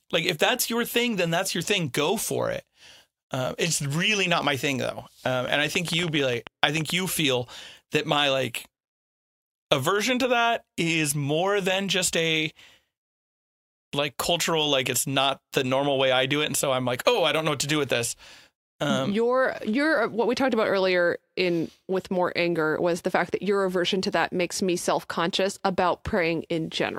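From 5.48 to 6.91 s, after "my thing though um", uneven ticking at about 9.2 per second, roughly fifteen clicks, stands out well above the speech. This train of clicks likely comes from nearby interference.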